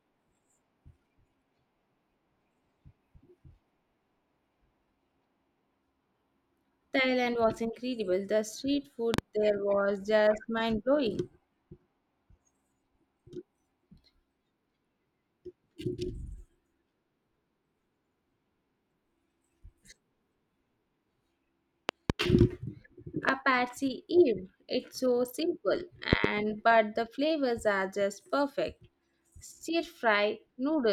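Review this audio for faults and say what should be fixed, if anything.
Loud pops break into the speech four times. A double pop at 9.14 to 9.21 s comes just before "there was just mind". Another double pop falls at 21.89 to 22.12 s. A single pop follows at 23.29 to 23.31 s. A final double pop at 26.13 to 26.27 s sits between "so simple" and "but the flavors are". Each peaks about 20 dB above the speech, which carries on underneath. A sudden voltage pulse, likely from a connector, switch or static discharge, was added to the signal. To prevent it, secure cables and switch gear before recording.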